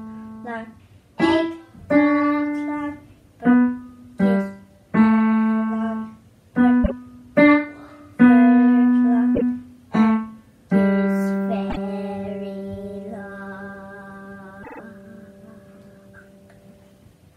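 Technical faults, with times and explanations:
6.83, 9.34, 11.69 and 14.62 s: repeated frames. A compressed block plays twice, 26.1 ms at the first two and 52.2 ms at the third. At 14.62 s a 52.2 ms block plays three extra times, adding 156.7 ms. The block length fits one or two codec frames written again. Each repeat is heard as a brief stutter. A waveform shows identical stretches back to back. A spectrogram shows a short pattern repeated.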